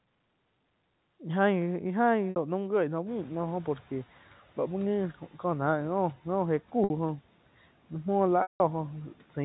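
At 2.30 s and again at 6.84 s, the sound briefly holds on a slightly buzzy, sustained tone for about 60 ms. This is packet loss with pitch repetition: a gap consistent with three 20 ms packets was bridged by repeating the last pitch period. Around 3 s the room noise jumps, and from 3.06 to 4.05 s it comes through with less reduction at first before sinking by about 7 dB. That is the noise suppressor catching up, its estimate taking about 1 s to follow the rise. From 8.42 to 8.60 s a longer 180 ms loss fades into silence, and the speech returns with a short cross-fade.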